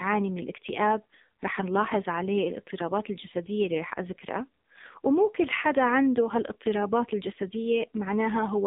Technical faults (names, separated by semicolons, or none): AMR narrowband mobile codec